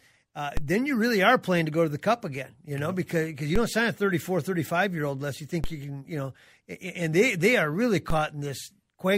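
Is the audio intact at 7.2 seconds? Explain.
Yes, the speech at 7.2 seconds plays through cleanly with no audible fault at that moment.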